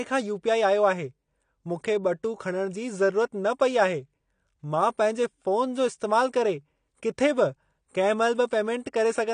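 From start to finish, nothing passes 9.7 kHz and sibilants fizz and warble, likely from AAC compression; a plain low-pass filter would sound dull but without that smeared texture.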